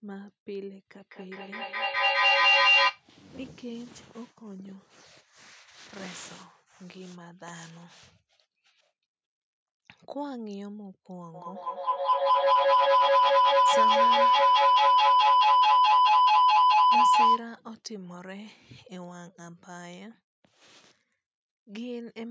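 Speech with feedback howl at 0.97–3.08 s (around 3 kHz) and 11.34–17.54 s (around 1 kHz), swelling to about 18 dB over the speech and pulsing every fifth of a second. Unlike echo, the repeats grow instead of fading.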